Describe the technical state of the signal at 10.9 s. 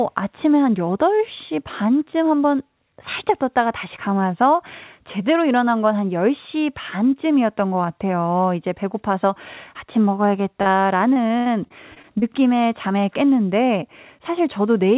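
At 10.9 s the signal sits inside a run of repeated packet loss (robotic sound) lasting from 10.62 to 12.24 s. Nine separate gaps, the longest 79 ms, are each bridged by stretching the preceding sound, so about a sixth of that span is concealment. The result is choppy sound with pieces missing, within the roughly 4 kHz call-codec band. Unlike a single dropout, the holes recur in quick succession, giving a sustained robotic texture.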